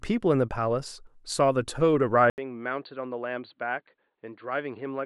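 At 2.30 s the speech breaks off for 80 ms, then resumes duller and boxier for the rest of the clip, with nothing above 4.6 kHz, a level around 10 dB lower and a faint new background noise well beneath the speech. This is most likely an input switched to a poorer device. A simple filter or codec bandwidth drop would narrow the band without also bringing the gap, the level shift and the different noise floor.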